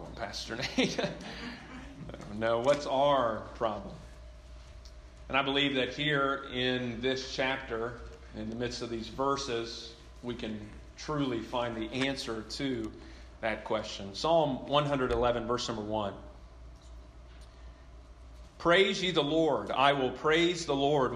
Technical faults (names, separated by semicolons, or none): none